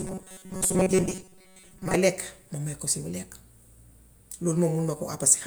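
Speech, with a robotic sound from repeated short buffers from 0.01 s to 1.95 s. Over that stretch the voice collapses into a rigid, metallic buzz pitched at 188 Hz that only loosely tracks the words, with around 70 percent of the audio apparently replaced by repeats. The likely cause is input arriving too slowly, so playback loops a segment of roughly 5.3 ms, one period of that buzz, while the real audio is dropped.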